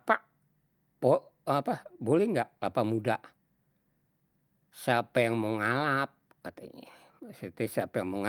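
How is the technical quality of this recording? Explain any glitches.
No glitches or technical faults can be heard anywhere in the recording.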